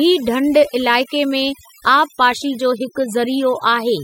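From the first moment to the last, the speech carries overdone noise removal: a noise reducer set far too aggressively has pulled individual frequency bands down or out whenever their level sat near its noise estimate, taking the quieter parts of the voice along. Between phrases the background drops, broken by twinkling specks. A spectrogram shows scattered isolated dots in the gaps and ragged, hollowed-out harmonics.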